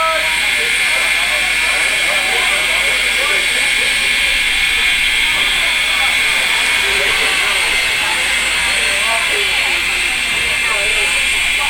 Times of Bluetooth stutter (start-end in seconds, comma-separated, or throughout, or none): none